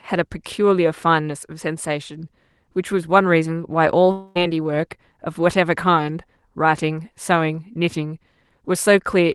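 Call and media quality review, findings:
Long network dropout, 4.11 to 4.37 s: speech stalls into a buzzy, fading continuation of the last sound that fills the whole gap, with no silence. About 0.24 s of speech never returns. Likely packet loss hidden by the receiver's concealment. Call codec path audible as band-limited to about 12 kHz.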